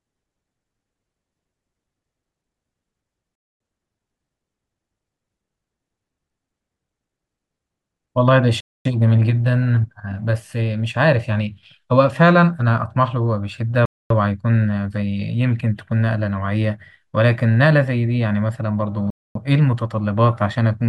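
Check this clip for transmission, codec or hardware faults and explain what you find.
One fault runs through the speech: a gap between chunks, repeated four times. Silent holes of 250 ms open at 3.35 to 3.60 s, 8.60 to 8.85 s, 13.85 to 14.10 s and 19.10 to 19.35 s. The audio arrives in 5-second chunks. Silence is inserted at each join. Nothing is dropped. The speech simply pauses and then resumes where it left off. Each hole recurs every 5.25 s.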